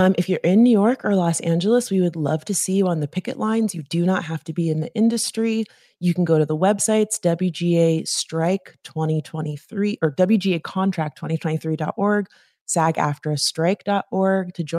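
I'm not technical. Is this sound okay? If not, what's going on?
Yes, this one's fine: nothing sounds wrong with it, so you can relax.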